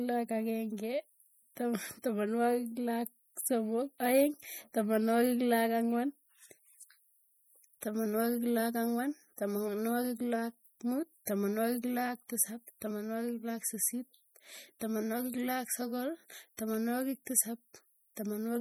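From start to finish, the speech carries plainly audible damage, most likely from MP3 compression. The encoder spends its bits only where its hearing model expects them to count. At a rate that fits roughly 48 kbps, bits run short. Weak frequency lines then drop out and return from frame to frame. That gives the sound a watery, swirling texture and smears the attacks. The treble itself still reaches about 21 kHz.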